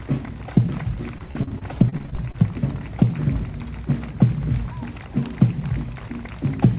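Between 1.18 and 2.36 s there's repeated packet loss, giving that robotic sound. Fourteen short dropouts, none longer than 40 ms, are patched by stretching the previous sound, so about a quarter of that stretch is filler. This is call-path audio with nothing above 4 kHz, which fits G.711 mu-law at 64 kbps.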